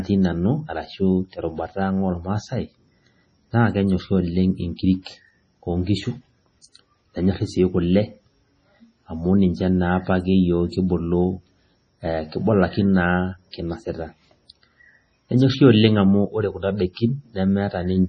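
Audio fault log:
throughout: MP3 compression, likely the cause of the watery, swirly speech with nothing above 10.5 kHz; heavy damage like this fits a bitrate near 24 kbps.
4.76–4.79 s, 5.02–5.06 s, 16.93–16.97 s: pre-echo, with hiss spreading 27 to 40 ms ahead of sharp attacks as block-wide quantisation noise fills the quiet before them.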